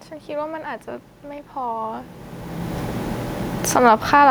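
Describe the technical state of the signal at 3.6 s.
At 3.6 s the automatic gain control starts falling, pulling the level down by about 7 dB through 4.16 s. Having judged the input too loud or its background noise too strong, it lowers its gain gradually, so the speech and the room noise behind it sink together.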